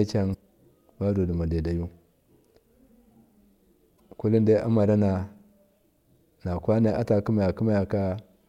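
Damaged data in a compressed stream appears at 0.30–0.35 s and again at 3.96–4.00 s in this speech: corrupted bytes make the decoder misread those frames and lose sync while it hunts for the next valid header, leaving brief glitches.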